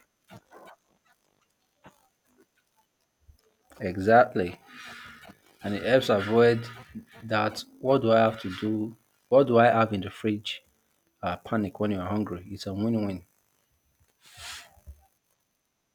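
Speech recording with no technical faults audible anywhere in it.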